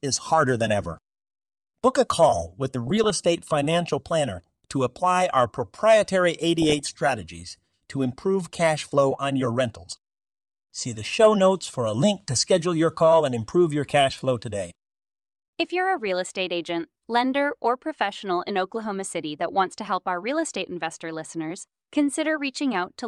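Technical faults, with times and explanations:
2.87–3.10 s, 6.62–6.80 s, 16.00–16.11 s, 18.77–18.91 s: DAB burbling. Residual bit errors corrupt MP2 audio samples, putting short blips of noise into single sub-bands, giving brief sub-band disturbances rather than broadband dropouts.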